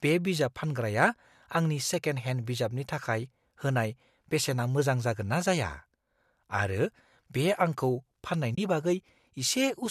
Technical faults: AAC frame loss with muting

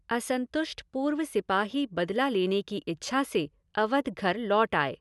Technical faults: none

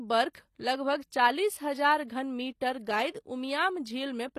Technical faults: HE-AAC compression

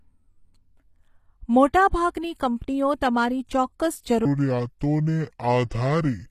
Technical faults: HE-AAC compression; section at the wrong speed; pre-echo

